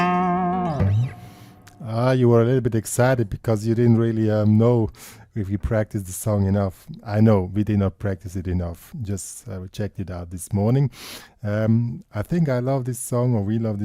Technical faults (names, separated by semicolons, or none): none